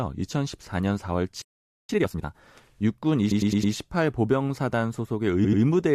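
At 1.42 s the speech cuts out mid-flow for about 475 ms, until 1.89 s, a playback stall likely caused by the player running dry or being blocked. On a waveform it is a flat gap; on a spectrogram, a blank vertical band.

From 1.89 to 2.35 s comes time-compressed catch-up: the backlog is played at 2x speed by dropping and cross-fading short pieces, so the speech sounds rushed at unchanged pitch. The spectrogram shows squeezed syllables with normal harmonic spacing.

Repeated frames cause a stutter from 3.31 to 3.73 s, where a 106.7 ms block plays four extra times and adds 426.7 ms. A second stutter runs from 5.44 to 5.61 s, where an 85.3 ms block plays twice more and adds 170.7 ms. The waveform shows identical shapes tiled back to back, and the spectrogram shows repeating stripes.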